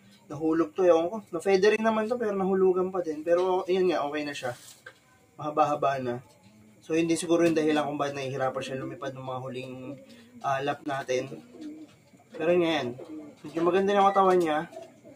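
A noise suppressor built for speech is applied to this sound throughout. It treats sustained tones and ambience as noise, so the level pumps by around 10 dB as held material and decays are pulled down while attacks pass.

The noise suppressor cuts sound by about 11 dB from 0.0 to 0.32 s. The sound sinks and thins there, and tails end early.

At 1.76 s a block of digital silence lasts 21 ms, which fits a 1024-sample buffer left unfilled. The abrupt drop to zero and return leave a short hole.

Further suppressor cuts, again reaching about 11 dB, follow at 4.55–5.4 s and 6.22–6.89 s.

A second silence block comes at 7.26 s. At 5 ms, consistent with a 256-sample buffer, it is heard as a tick.

A cut at 9.65–10.44 s precedes the third silence block at 10.84 s, another 21 ms gap that drops out.

The remaining suppressor cuts fall at 11.3–12.35 s, 13.24–13.51 s and 14.67–15.16 s.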